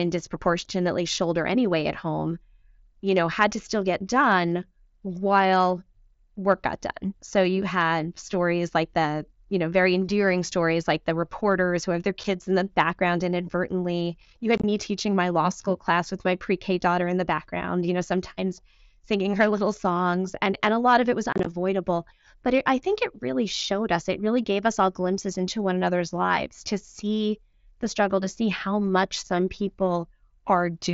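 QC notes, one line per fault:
12.24 s, 14.58–14.64 s, 21.33–21.46 s: unconcealed Bluetooth headset packet loss. The speech drops out with hard edges: one clean 7.5 ms hole after "reporters who have their", then chopped runs of about 45 ms lost over 60 ms before "teaching my law school" and 67.5 ms over 135 ms after "lot of it was". The 7.5 ms step fits lost headset packets replaced by silence. These show as flat waveform gaps and vertical blank slots on a spectrogram.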